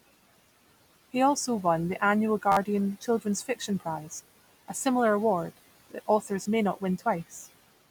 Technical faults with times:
2.52-2.57 repeated buffer
4.17-4.19 repeated buffer
6.43-6.46 repeated buffer

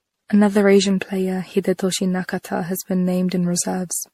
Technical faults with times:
0.00-4.14 generation loss

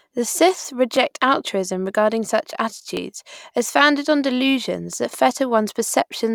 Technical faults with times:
0.96 overlapping chunks
2.97 overlapping chunks
4.98 overlapping chunks

